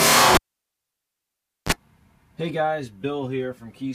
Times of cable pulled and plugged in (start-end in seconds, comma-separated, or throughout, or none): 0.35-1.72